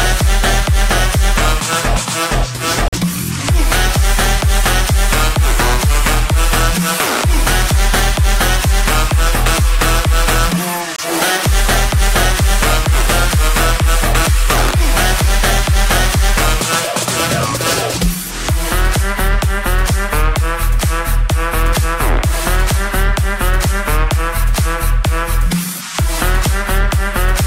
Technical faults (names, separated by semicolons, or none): corrupt frame muted